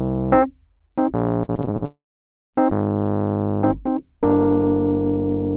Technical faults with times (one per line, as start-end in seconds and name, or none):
1.44-1.83 repeated packet loss (robotic sound)
1.85-2.55 long network dropout